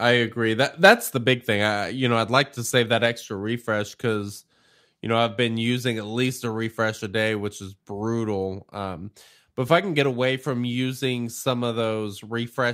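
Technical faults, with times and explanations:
0.84–0.92 s, microphone overload: just before "the big thing I", the loudest peaks flatten into a harsh, crackly edge, with around 7 percent of samples pinned at the ceiling. The input was likely driven about 3 dB past the converter's limit, slicing off waveform tops.
1.02 s, microphone volume stepped down: right after that distorted burst and just before "the big thing I", voice and background drop together by about 2 dB in one abrupt step. This is likely the call software reacting to the clipping by cutting the device's input gain at once.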